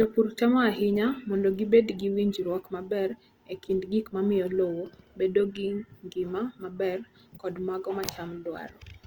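A speech clip with Opus compression running the whole way through: the sound is grainy and rough, with a noisy, fizzy texture, though the top end still reaches about 20.2 kHz. That's likely the codec's music mode at a low bitrate, something like 24 kbps.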